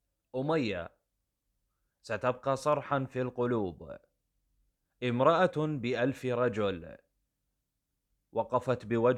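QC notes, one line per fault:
No faults found.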